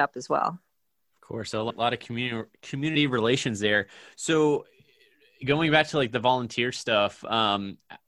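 A run of compressed frames was skipped in this speech recording: at about 1.69 s, roughly seven frames never reached the output, either missing from the stream or rejected by the decoder as damaged. After "course so a" the audio jumps straight to "a lot of community", dropping about a fifth of a second. The jump fits a frame length near 26 ms.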